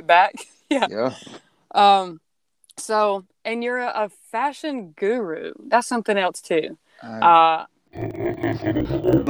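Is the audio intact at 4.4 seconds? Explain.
Yes, the audio is intact at 4.4 seconds, with no audible fault at that moment.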